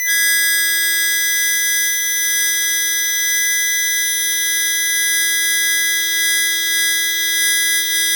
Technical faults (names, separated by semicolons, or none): none